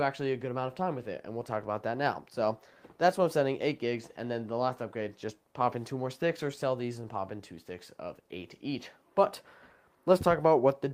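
Nothing goes wrong anywhere in this audio, so there's no fault to point out or explain.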